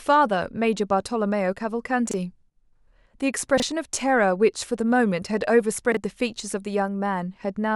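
Speech with chunks out of order at 2.09, 3.58 and 5.92 s: a 23.2 ms block plays one slot late, giving a jumbled blip. Nothing is missing, unlike a dropout.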